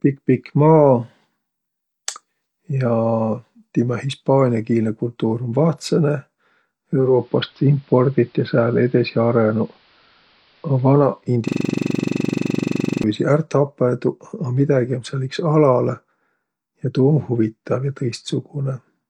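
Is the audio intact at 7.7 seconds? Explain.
No. From 6.93 to 11.34 s the speech goes dull and faintly hissy: digital radio blending to analogue, cross-fading onto the AM broadcast.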